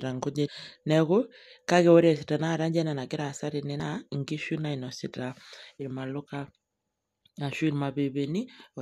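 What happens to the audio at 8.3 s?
Nothing goes wrong at 8.3 s; the audio is intact at that moment.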